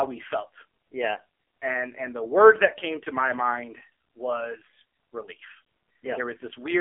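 Speech carried over the AMR narrowband mobile codec throughout: the band runs from about 300 Hz to 3.4 kHz, with nothing above 3.6 kHz, and heavy codec damage gives a buzzy, synthetic vocal-tract-model sound, which fits a low 5.9 kbps mode.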